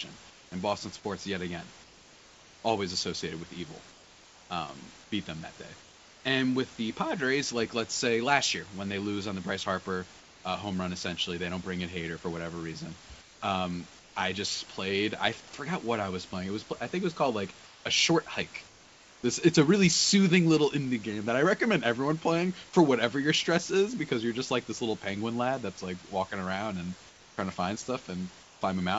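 Comfort noise replaces the background in the speech pauses at 0.30–0.52, 1.84–6.24, 10.20–10.44, 13.21–14.15, 17.65–19.23 and 27.09–28.61 s. The real room sound turns into a flat, featureless hiss. At 0.30 and 10.20 s it is about 3 dB quieter. Discontinuous transmission is the likely cause.

At 11.63 s a dropped buffer (overrun) leaves a tiny skip. A few milliseconds are likely lost and the edges are butted together.

Under both, the call path stops near 7 kHz, which fits G.722.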